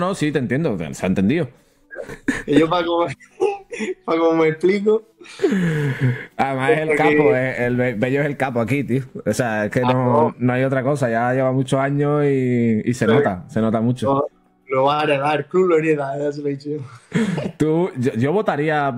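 From 7.26 to 9.03 s the sound turns grainy. Quiet parts go gritty, and the distortion tracks the signal rather than sitting steady beneath it. The error sits around 45 dB below the signal. This is likely low bit depth without dither, fitting truncation to about 10 bits.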